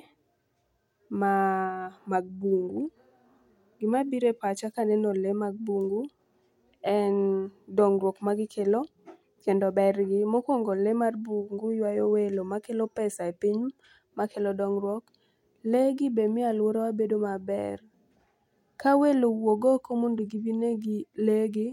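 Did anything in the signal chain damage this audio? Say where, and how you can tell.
No, nothing damaged it.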